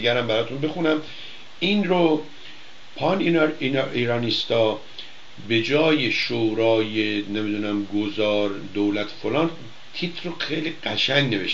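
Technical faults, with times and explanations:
6.23–6.27 s, overlap between stream segments: right after the segment boundary, about 42 ms of audio simply goes missing and the waveform jumps, so you get a tiny skip. Two neighbouring chunks claimed overlapping timestamps, and the player trimmed that overlap as if the sound had been doubled, but it hadn't, so real material got cut. The placement near 6 s fits segments roughly 6 seconds long.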